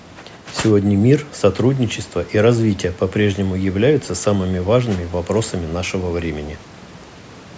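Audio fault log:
No faults heard in this speech recording.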